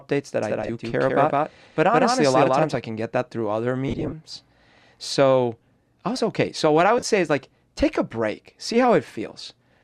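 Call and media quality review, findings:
Doubled audio track, 0.43–2.75 s, ending just before "I can get that". A second full-band copy sits roughly 150 ms behind at about equal level, with no decay or room colouring, giving a hard slapback. The likely cause is a second capture path or an edit holding two offset copies. On the waveform, each onset is repeated roughly 150 ms later. On the spectrogram, every speech event appears twice, and the copy starts and stops abruptly at the segment edges.

Lost LE Audio frames at three points. At 0.63–0.69 s, inside the doubled span, about 30 ms is gone across 60 ms. At 3.88–4.13 s, right after "get that through other", about 140 ms is gone across 240 ms. At 6.98–7.04 s, between "what I" and "say is like take", 45 ms is gone across 60 ms. The losses are scattered short runs, which fits 7.5 ms frames. LC3 concealment replays the last spectrum with random signs, so harmonics smear into noise. 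On the spectrogram, the harmonic striations blur into broadband patches, and the waveform looks noise-like.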